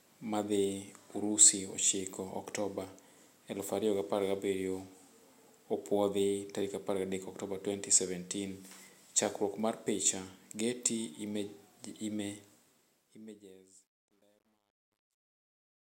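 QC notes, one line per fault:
12.47–15.90 s, truncation distortion on a fade. The speech fades out from about 12.5 s to the end. The gain stage keeps too few bits, which fits roughly 11-bit words, and adds no dither. As the level drops, each sample snaps to the nearest coarse step. The waveform turns into a few square steps. From 13.2 s to 15.9 s the tail sounds gritty.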